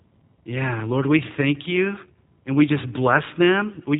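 Speech carrying plainly audible G.729 codec damage from start to finish: a rough, slightly synthetic quality consistent with 8 kbit/s pulse-and-filter coding. A spectrogram shows nothing above about 3.8 kHz, a hard ceiling, with smeared, grainy harmonics below it.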